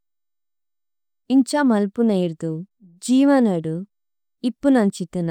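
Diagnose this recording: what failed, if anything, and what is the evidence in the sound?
Nothing failed in this recording, and there is no evidence of a fault anywhere in the sound.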